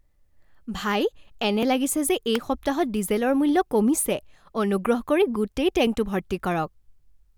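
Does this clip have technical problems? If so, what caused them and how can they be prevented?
Yes. The recording program likely failed to read its samples before the hardware overwrote them. This dropped buffer (overrun) lost a few milliseconds and joined the audio directly, causing a small jump at 1.63 s, between "ভাই এনে" and "লাগিছে যে", and at 5.87 s, after "কৰি গোটেই". Larger buffers or higher capture priority prevent this.

A nearby switch, motor or static discharge likely arced, and the audio line picked it up. This electrical switching spike is a sharp snap or tight cluster of clicks on top of the speech at 2.35 s. Shielded, well-grounded cabling kept away from switching equipment prevents it.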